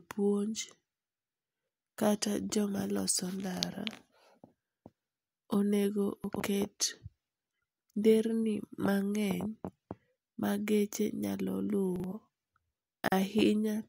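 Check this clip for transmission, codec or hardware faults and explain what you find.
Chunks out of order occur three times in this speech. From 6.24 to 6.4 s, one 40 ms chunk plays three chunks late. At 11.96–12.04 s and 13.04–13.12 s, a chunk plays one late. Nothing is lost, but the misplaced pieces jumble the sound.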